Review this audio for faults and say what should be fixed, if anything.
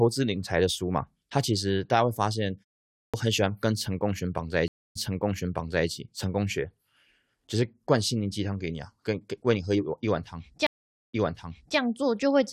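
Clipped start after a pause at 2.99 s and 10.99 s: after pauses of 0.43 s and 0.32 s, the waking output device swallows about 0.15 s, so speech begins abruptly.

Stream reconnect from 4.68 to 5.88 s and from 10.67 to 11.78 s: the connection dropped, leaving 274 ms and 324 ms of silence. The player then started a fresh decoder, and playback resumed 0.93 s and 0.79 s earlier, repeating audio the server resent.

Keep the output device awake through short pauses, and buffer enough to ride out brief connection losses without repeating audio.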